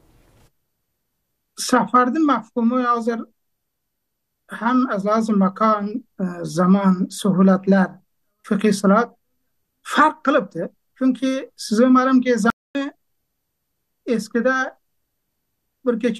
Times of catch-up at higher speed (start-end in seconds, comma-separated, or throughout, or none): none